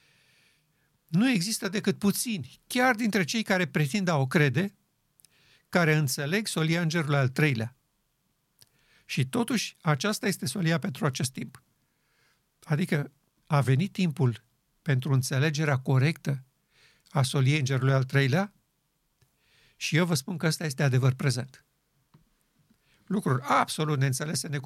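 No technical faults can be heard anywhere in the speech.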